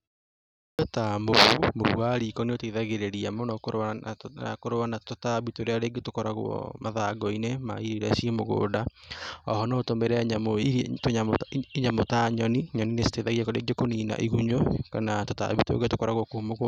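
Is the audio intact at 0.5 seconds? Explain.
No. From 0.38 to 0.79 s the audio has a clipped start after a pause: the output device, idle through the 0.38 s silence, takes about 0.41 s to wake, so speech bursts in abruptly without its opening sounds. Unlike muted pauses, actual speech is lost.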